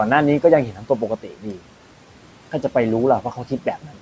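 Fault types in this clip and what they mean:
noise suppressor artifacts: The background drops away in the gaps and swells back up under the speech. The suppressor tracks the steady room noise and pulls down each frequency band it judges to be noise, frame by frame, by about 12 dB. Those band-by-band gain changes keep shifting with the speech.
speech cut by the noise suppressor: Stretches of speech turn faint or sound swallowed. Between 0.71 and 1.63 s about half a second is pulled down, by up to about 13 dB. Shorter dips follow at 3.22 to 3.66 s, up to about 9 dB, and at 3.82 to 3.99 s, up to about 12 dB. The suppressor mistook these quieter parts of the speech for background noise and lowered them along with it.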